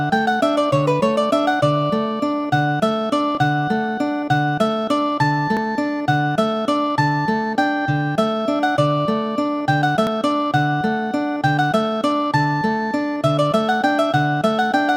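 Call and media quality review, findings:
Forward jumps at 3.35, 5.57 and 10.07 s, no silence. Likely dropped buffer (overrun): capture fell behind and lost roughly 20, 20 and 40 ms.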